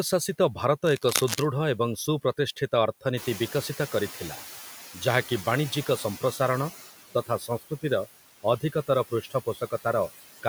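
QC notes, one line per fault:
Throughout: noise suppressor artifacts. The suppressor pulls down every band it judges to be steady noise, frame by frame, by about 13 dB. The background drops in the gaps and swells back under the speech. On a spectrogram the noise floor looks patchy, with dark holes between syllables and isolated flickering bins in the residual noise rather than an even grey wash.
0.85–1.45 s: cable scratch noise. For about 0.6 s a dense, irregular rustling sits over the speech, loud relative to it, roughly 5 dB below the signal. This is likely a worn cable, connector or control being moved, its contact resistance jumping rapidly and injecting bursts of broadband crackle. On the waveform it shows as jagged, uneven spikes riding on the speech envelope; the spectrogram shows scattered vertical streaks reaching well into the kHz range.
3.17–6.7 s: noise suppressor catching up. 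Just after 3 s the room noise climbs by about 14 dB, and the suppressor's noise estimate trails behind it. The louder background passes with little reduction at first, then sinks gradually over about 3.5 s as the estimate adapts, ending at about 10 dB of cut. A spectrogram shows a bright band of noise that fades slowly back toward the darker floor; the waveform shows a raised baseline tapering down.
7.14–7.84 s and 9.1–9.86 s: speech cut by the noise suppressor. In each span the suppressor mistakes parts of the speech for noise and turns them down along with the background, by up to about 14 dB in the first and about 16 dB in the second, affecting roughly 0.3 s each time. Soft consonants and tails sound swallowed or faint. On a spectrogram the high-frequency consonant energy and word endings appear abruptly darkened; the waveform shows clipped-looking dips in the envelope.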